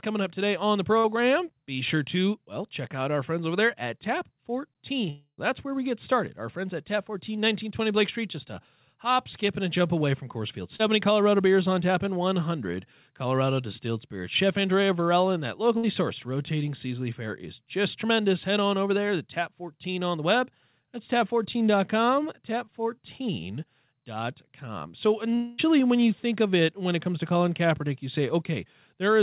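Right after "up today on the", at 0.98 s, there's a burst of packet loss: about 60 ms goes missing and gets papered over by continuing the last sound and fading it. At 5.10 to 5.40 s it sounds like a long network dropout, likely, with the fill fading into a brief silence. At 10.76 s a short concealed packet loss leaves a quick smear. Another burst hits at 15.77 s, between "and that" and "sourced rotating seasonally fair". A second, likely dropout from 25.35 to 25.60 s fades out just before "when you think of", all over a G.711 call path with nothing above 4 kHz.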